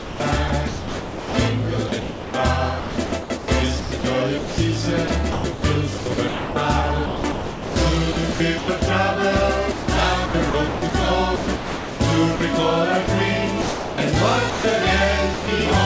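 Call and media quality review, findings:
Choppy sound with gaps, 0–1.34 s, 1.88–8.82 s and 9.72–12.40 s. Likely sound chopped by the voice detector gating the sender on and off, with comfort noise filling the gaps.

Brief dropouts into steady comfort noise at 13.06–13.08 s, 13.62–13.98 s, 14.50–14.64 s and 15.34–15.48 s. Likely sound dropped by the voice detector, which treated quiet passages as background. The band-limited sound, with nothing above 8 kHz, fits a G.722 call path.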